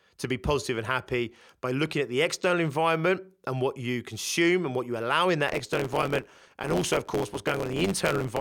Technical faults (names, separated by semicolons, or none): block size mismatch (truncated)